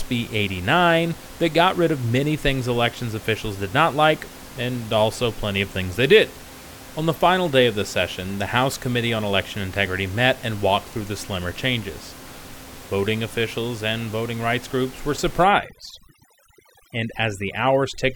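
Overdone noise removal sets in at 15.44 s, right after "voting rights groups were", and lasts to the end of the speech at 18.16 s. The room noise, sitting about 19 dB below the voice, is treated too aggressively: any frequency band that comes close to the estimated noise level is pushed far down or switched off. Quiet parts of the voice get cut along with it, so the background drops and breaks up into twinkling specks.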